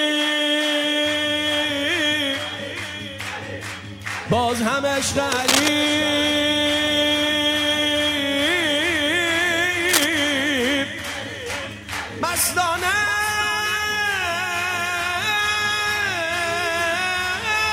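A couple of bursts of cable scratch noise, at 5.32 to 5.68 s and 9.89 to 10.04 s, rustle over the audio at roughly its own level, likely a worn cable or connector being moved.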